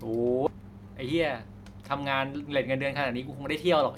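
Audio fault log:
0.46 s: skip ahead. Playback jumps forward with no fill, so about half a second of speech never plays and the sounds on either side of the cut are joined almost directly. The listener hears an abrupt splice rather than a pause. This fits audio being discarded while later packets were already queued, either lost in transit or dropped by the jitter buffer on overflow, which cut the playout delay by roughly half a second in one step.
0.54–3.29 s: jitter buffer speed-up. For nearly three seconds the speech runs at about 110% of normal rate while the pitch stays unchanged, giving a hurried delivery. The receiver is trimming short slices of one or a few pitch periods again and again to drain excess buffered audio, removing around 300 ms in total. Because whole pitch cycles are cut, the voice keeps its pitch and only the timing tightens.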